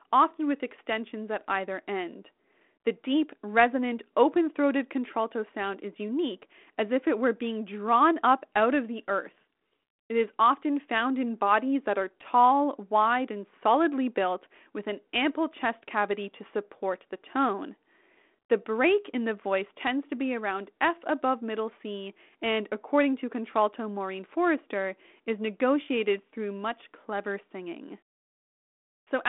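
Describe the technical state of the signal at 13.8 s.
At 13.8 s the speech is intact, passing through a G.726 ADPCM telephone path at 32 kbit/s that confines it to roughly 250 Hz to 3.5 kHz, with nothing above 3.8 kHz and only light coding roughness.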